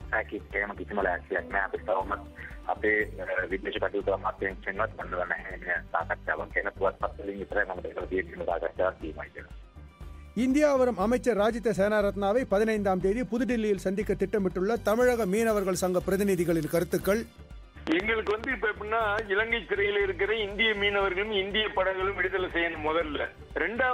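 From 14.76 to 17.36 s, pre-emphasis left on: an FM-style 75 µs treble boost, about 13 dB at 10 kHz, sounds thin and hissy, with brightened upper bands on a spectrogram.

From 17.87 to 19.20 s, a train of clicks, likely interference, ticks around seven times at an uneven 4.6 per second, visible as spikes towering above the waveform.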